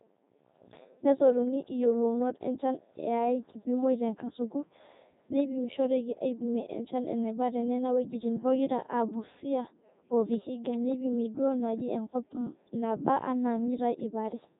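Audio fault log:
throughout, Codec 2 vocoder: the speech is resynthesised from sine waves using only pitch, voicing, energy and envelope, leaving it heavily robotic and buzzy, which fits the 3.2 kbit/s mode. A spectrogram shows neat harmonic combs with nothing above 3.8 kHz.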